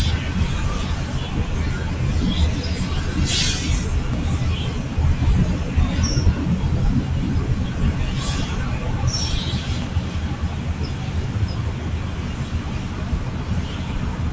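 From the start and for the whole clip, sustained parts of the sound pump and thin out while attacks come through intact, with the level swinging by about 5 dB. This is a noise suppressor applied to music or sounds: a speech-tuned suppressor treats steady tones and tails as noise and pulls them down.

At 4.14 s a low thump marks a DC step, when the waveform's zero line suddenly shifts to an offset. The offset lasts until 9.82 s. The sound carries on unchanged throughout, within the call chain's band that stops at 8 kHz.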